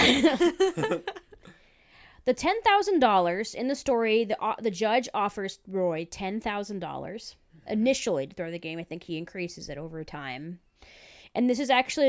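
Speech with no audible faults.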